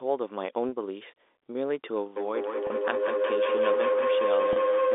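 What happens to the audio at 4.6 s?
At 4.6 s the audio carries a steady, ringing tone around 500 Hz that swells in pulses roughly every 200 ms and reaches about 1 dB above the speech level. This is a feedback howl, running from 2.16 s to the end of the clip. Sound from a loudspeaker is reaching a microphone on the same call and looping back with more gain each trip, so the repeats grow instead of dying away and settle on the frequency the loop favours.

Just before that moment, from 4.53 s to 4.56 s, there is a brief, slightly held, buzzy stretch where the sound seems to sustain on one pitch for 30 ms. This is packet loss with pitch repetition. The gap fits a single lost packet, and the receiver filled it by repeating the last pitch period, which produces that momentary frozen, buzzy quality before the speech returns.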